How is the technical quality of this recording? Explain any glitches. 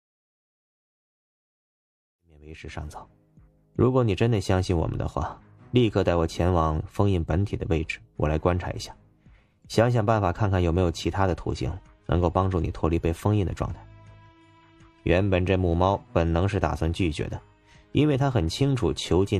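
No technical faults are audible.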